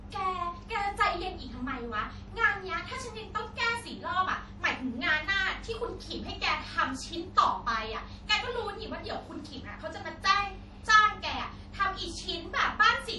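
Likely MP3 compression at a low bitrate, around 48 kbps, throughout: the treble is cut and weak frequency lines flicker, giving watery, swirling speech with smeared attacks.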